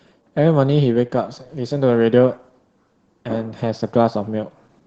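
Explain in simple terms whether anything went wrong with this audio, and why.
Yes, something went wrong: the speech was squeezed hard by Opus voice compression for the whole clip, about 5 seconds. The codec kept only a simplified model of the voice and dropped the highest sounds, so it comes out plainly muffled, a little hoarse and slightly robotic.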